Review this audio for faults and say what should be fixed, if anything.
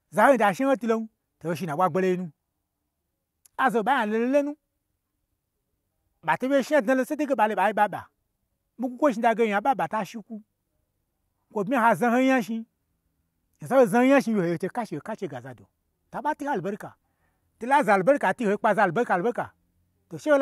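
No faults turn up in the recording, so nothing needs to be fixed.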